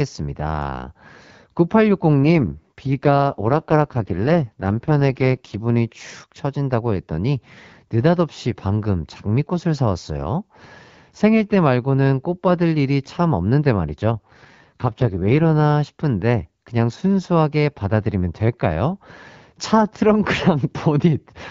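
From 2.24 to 5.56 s and again from 14.12 to 15.53 s, the speech turns rough and raspy without any gap or loss of bandwidth. This is an AMR rate drop, and the sound fits the wideband codec falling from 12.65 to 6.6 kbit/s before recovering.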